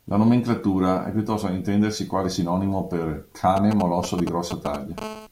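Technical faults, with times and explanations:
3.57–5.00 s, GSM signalling bursts: just after "intendersi quale sinonimo per", a galloping dit-dit-dit of brief 217 Hz buzzes, nearly as loud as the speech. A nearby 2G phone is sending short groups of radio bursts, which the audio circuitry rectifies into sound.
5.02–5.27 s, GSM phone buzz: a hard, raspy, harmonic-rich buzz at 217 Hz, about 11 dB below the speech and unrelated to it. It holds steady because the phone is now in a call, transmitting continuously in 217-per-second bursts that the circuitry rectifies.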